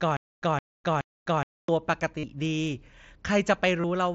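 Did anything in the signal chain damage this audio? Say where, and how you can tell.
Yes. From 0 to 1.69 s, a 166 ms fragment repeats every 421 ms with 255 ms of dead silence between. This is stutter with silent gaps, likely a stalled playback buffer replaying its last chunk.

At 2.19 to 2.23 s (45 ms) and 3.81 to 3.84 s (30 ms), there are brief buzzy held tones. This is concealed Bluetooth headset packet loss on the wireless link, where lost packets are filled with repeated waveform.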